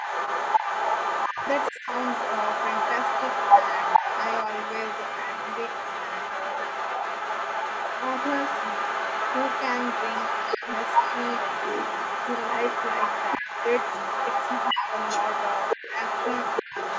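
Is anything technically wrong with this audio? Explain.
Yes. A second voice, the other side's voice leaking through, runs the whole clip at roughly the same level as the main speech, likely an echo canceller failing on loudspeaker pickup.

The main voice also dips or drops out briefly at 1.32, 1.71, 3.99, 13.39, 14.73 and 16.62 s, by roughly 10 to 30 dB, each dip a fraction of a second. This is speech suppressed in double talk, likely the canceller turning everything down while both sides spoke.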